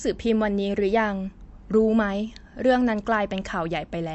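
Likely MP3 compression at a low bitrate, consistent with about 48 kbps, has damaged this speech recording throughout. Nothing remains above 8 kHz, so the treble sounds dull, while weak frequency lines flicker on and off, giving a watery, swirly texture, metallic chirps on s sounds and smeared attacks.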